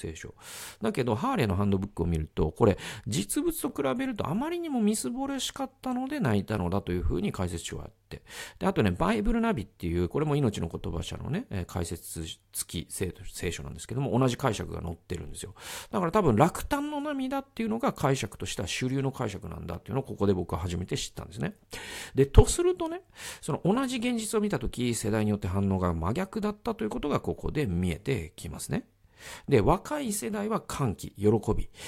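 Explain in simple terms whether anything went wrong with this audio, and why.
Yes, the speech has overlapping chunks. Small clicks or stutters occur at 3.70, 7.71, 19.74 and 23.76 seconds. The audio was handled in 4-second pieces, and each piece began slightly early. So 12 milliseconds play twice at every join.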